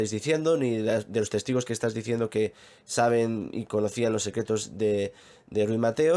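No technical faults are audible anywhere in the recording.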